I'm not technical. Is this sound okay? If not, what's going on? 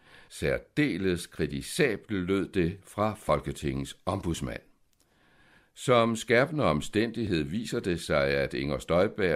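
No. There's an overlap between stream segments: two pieces of the speech claimed the same moment, so the player cut a sliver away, causing tiny skips at 1.30 s, 3.29 s (after "lød det fra") and 7.27 s (before "viser det sig").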